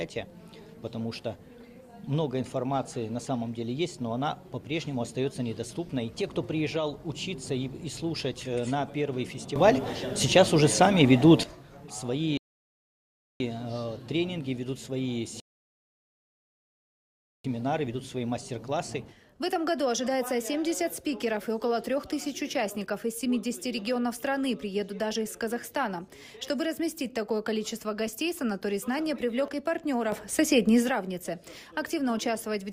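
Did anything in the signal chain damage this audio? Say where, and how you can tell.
Yes. Twice the sound and its background noise leap up together in level and then drop back: by about 12 dB from 9.56 to 11.44 s, and by about 8 dB from 30.12 to 30.89 s. Because the noise floor rises with the wanted signal, this is a sudden gain jump in the digital processing, not a change at the source. The likely cause is a gain setting or bit shift applied in one sample step, with no ramp.

Two rebuffering stalls come from the network and playback buffer. At 12.37 s the audio cuts to silence for about 1.03 s, and at 15.40 s it goes silent again for about 2.04 s. Each time it picks up exactly where it stopped, with nothing skipped. That pattern shows the player ran out of downloaded data and waited for more to arrive, which adds about 3 s of dead time without losing any content.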